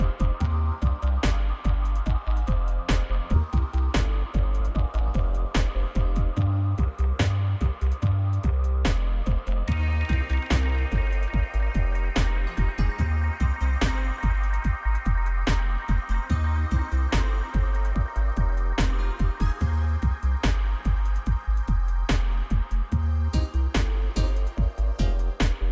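At 3.34 s about 0.7 s of queued audio was dropped in a skip ahead, so playback jumps forward abruptly with no gap, the two sides butted together. From 4.00 to 5.83 s a jitter buffer speed-up trims short pitch-period slices, roughly 50 ms in total, so the sound runs 3% faster at unchanged pitch. Throughout, nothing is heard above 8 kHz, which fits a wideband call codec.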